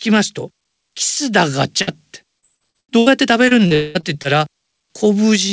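At 1.82 s there's a burst of packet loss lasting about 70 ms. A short run of audio never made it to the receiver in time, so it stretched out the last bit of sound it had and eased it down to cover roughly 50 ms of the hole. You hear the last sound held briefly and fading, then the speech picks up slightly further along with about 60 ms simply gone.

From 2.39 to 3.13 s comes the first stretch of repeated packet loss, giving that robotic sound. There are seven separate gaps, the longest about 78 ms, and together they account for roughly 280 ms missing, so over a third of that span is patched-over audio. Each hole gets filled by continuing the previous sound, and the next one arrives before things settle, which makes the speech choppy.

The second run of repeated packet loss covers 3.49 to 4.26 s, but it's lighter. There are four gaps, the longest about 41 ms, about 100 ms missing in total and around a tenth of the span concealed. 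It has the same patched character, just sparser.

Inside that second stretch, from 3.75 to 3.97 s, there's a longer hole that sounds like a network dropout, likely a brief cut in the connection. Around 200 ms of audio is missing, and the receiver fills all of it by drawing out the last sound into a fading buzz or hiss rather than leaving silence. The speech then resumes past the lost section.

Throughout, the call path's bandwidth shows as nothing above 8 kHz, which fits a wideband call codec such as G.722.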